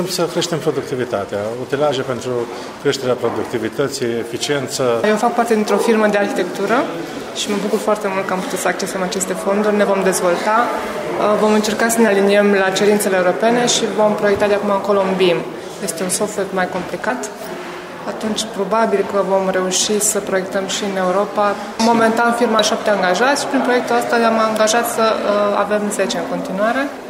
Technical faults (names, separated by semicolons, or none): damaged data in a compressed stream